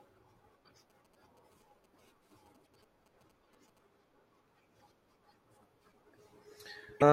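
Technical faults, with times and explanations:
0.59–0.61 s, 2.63–2.65 s, 4.77–4.81 s and 6.97–7.03 s: damaged data in a compressed stream. Each event is a brief chirp or blip lasting 24 to 52 ms. Corrupted bytes make the decoder misread the affected frames, lose its place in the bitstream, and hunt for the next valid frame header. The garbled output is heard as that squawk.
0.9–3.79 s: GSM signalling bursts. A 2G phone nearby was exchanging short control bursts with the network rather than carrying a call, and the audio circuitry rectified that radio energy into the signal. The result is a galloping dit-dit-dit of short buzzes at about 217 Hz, the GSM frame repetition rate. It sits roughly 30 dB below the speech.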